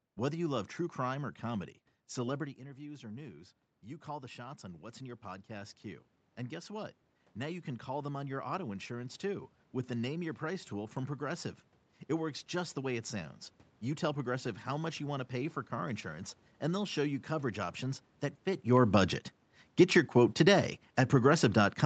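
From 2.37 s, just after "true crime or comedy", automatic gain rising sets in. The talker moved back, and the gain control slowly added about 13 dB. Voice and room noise swell together until 14.68 s, near "much you want to".

At 18.6 s, after "you coverage options that", automatic gain falling follows the talker coming closer. The level starts loud, then the gain eases down, and voice and background sink together to the end.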